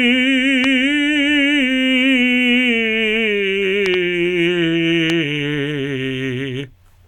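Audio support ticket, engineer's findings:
Loud pop, three events. Likely a voltage pulse entering the chain (connector, switch, static or driver glitch), shaped by downstream circuitry. Sharp pops around 15 dB above the music at 0.64–0.66 s, 3.86–3.96 s (double pop) and 5.10–5.12 s; music continues underneath.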